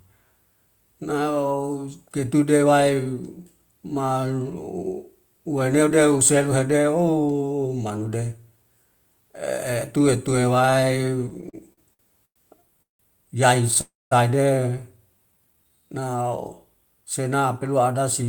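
From 11.29 to 13.01 s the speech breaks into repeated stalls (stutter): ten short holds in which the receiver keeps sounding the last fragment because packets arrived late and the jitter buffer kept running dry. Together they add about 459 ms of filler, roughly 27 percent of that stretch, with the longest hold at 170 ms. Nothing is lost, but the delivery lurches. Unlike a single freeze, the interruptions are many, short and spread out.

At 13.81 to 14.13 s there is one call audio freeze. The last sound is drawn out as a fading buzz or hiss and then drops to silence for about 200 ms. In total 303 ms is inserted, and playback resumes exactly where it stopped, now running 303 ms later than before. The likely cause is packets held up in transit, emptying the buffer. What sets this apart from the stutter is one long gap ending in silence, not a string of brief repeats.

From 15.32 to 16.29 s a jitter buffer slow-down stretches the audio by 160 ms, so it plays at about 85 percent speed while the pitch stays the same. 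The receiver repeats single pitch periods and slivers of pauses to rebuild its reserve, so sounds become drawn out. There are no audible breaks, which separates it from both stalls and freezes. It simply sounds sluggish rather than interrupted.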